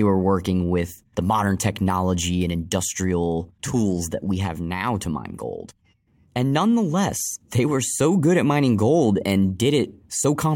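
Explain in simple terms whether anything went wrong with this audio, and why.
Resampler restarted on every block, throughout: each 20 ms slice was converted separately, leaving small edge errors that make a 50 Hz buzz under the speech.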